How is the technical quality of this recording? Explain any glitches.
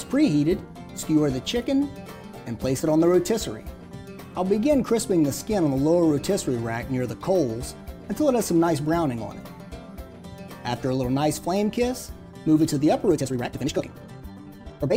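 The recording has one clear glitch near the end. A time-stretched section runs from 13.06 s to the end of the clip at 14.97 s, where the audio suddenly plays about 1.86 times faster while its pitch stays put. This is likely software squeezing the passage to fit a shorter length, dropping short slices of the signal so the pitch holds. Those removed pieces make the sound rushed, and the jump in pace at 13.06 s is abrupt.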